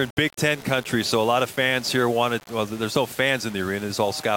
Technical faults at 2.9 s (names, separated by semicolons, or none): low bit depth without dither